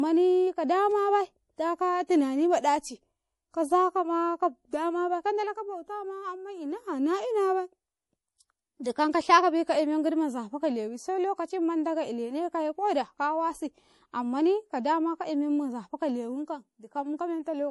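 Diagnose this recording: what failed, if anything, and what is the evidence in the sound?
The codec stage is the likely culprit: MP3 compression at a bitrate that sounds like about 48 kbps. Throughout the speech nothing remains above 11.5 kHz, and weak spectral detail flickers between frames, giving a plainly audible watery swirl and smeared, chirpy s sounds.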